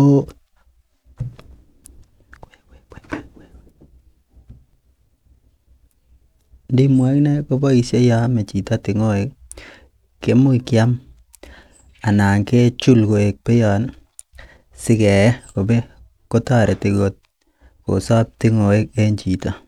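Nothing technically wrong turns up anywhere in this speech recording, so there's no fault to time or trace back to a cause.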